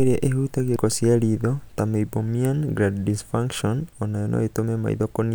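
At 0.76 s the speech breaks with a brief tick and a near-instant silence of a few milliseconds, then resumes from a different point. This is a CD skip: a knock or disc flaw threw the laser onto another turn of the spiral track.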